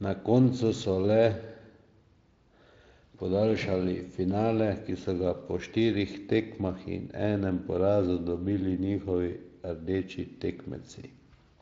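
Listening to the speech in this clip, nothing stood out as a technical problem.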